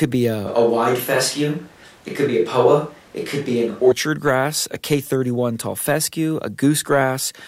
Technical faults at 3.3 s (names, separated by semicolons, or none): switch to a distant microphone